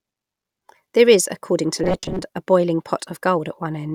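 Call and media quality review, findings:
Robotic sound from repeated short buffers, 1.84–2.24 s. Speech collapses into a rigid metallic buzz near 188 Hz, roughly tracking the words. Likely audio starvation: playback loops a ~5.3 ms slice while about half the real audio is dropped.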